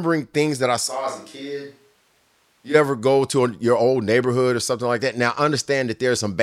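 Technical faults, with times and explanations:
0.89–2.73 s, switch to a distant microphone: the speech abruptly turns hollow and roomy, loses bass and drops about 10 dB, with room noise rising to about 35 dB below it, then snaps back. The likely cause is the close microphone dropping out. A plain gain dip wouldn't change tone and room together.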